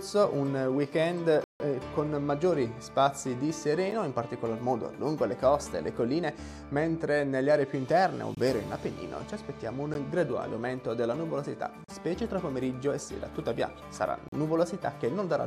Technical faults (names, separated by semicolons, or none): block of digital silence